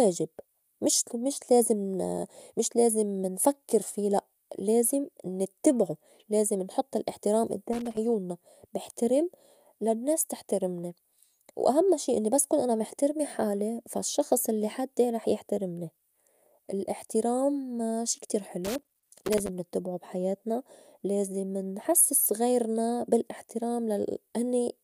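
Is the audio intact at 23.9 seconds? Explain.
Yes, at 23.9 seconds the speech plays through cleanly, with no dropout, click, distortion or other fault to be heard.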